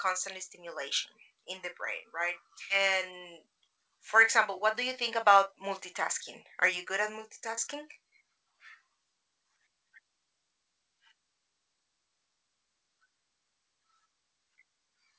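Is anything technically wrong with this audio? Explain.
Yes, there are two kinds of fault in this speech.

Skip ahead, 2.70 to 2.72 s, right after "in the brain right": playback jumps forward, losing around 0.4 s of speech with no gap filled. A stretch of audio was dropped while later audio was already waiting, so both sides butt together. The waveform shows an abrupt splice, and the spectrogram shows formants changing discontinuously.

Jitter buffer speed-up, 2.79 to 5.65 s (105%, about 150 ms removed) and 6.63 to 7.75 s (103%, about 40 ms removed): the buffer held excess audio and trimmed pitch-period pieces repeatedly. The speech in the first span sounds slightly hurried at unchanged pitch. Spectrogram harmonics stay level while syllables compress in time. The G.722 call path at 64 kbps shows as nothing above 8 kHz throughout.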